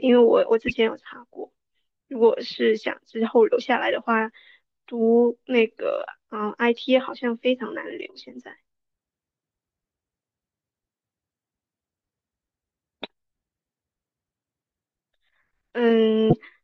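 At 0.68–0.72 s, 4.88 s and 16.30–16.33 s, corrupt frames were decoded. Flipped bits misplaced spectral energy over one or two frames, producing brief chirps and noise blips.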